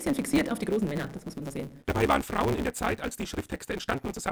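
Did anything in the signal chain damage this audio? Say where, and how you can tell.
Yes, there's a block size mismatch (truncated) at the driver or buffer stage, running through the whole clip. You hear a steady buzz at about 138 Hz, and everything plays about 1.6 times fast while the pitch stays roughly normal. That fits one stage writing 512-sample blocks while the next reads only about 320 of each, dropping the tail every time. Those regular cuts make the buzz, and skipping the discarded audio speeds things up.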